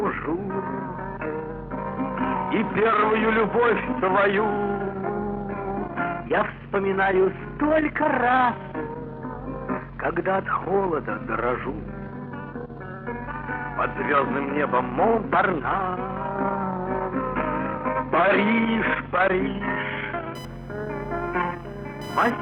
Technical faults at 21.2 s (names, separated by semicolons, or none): computer activity noise